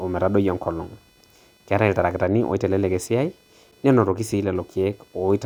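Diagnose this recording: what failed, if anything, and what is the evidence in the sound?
The analogue wiring failed: the audio circuit shares a ground with the computer, so processor, graphics or mouse load changes leak in as computer activity noise. Throughout the speech, a buzzy chirping around 500 Hz, roughly 35 dB below it, tracks the machine's activity rather than the voice.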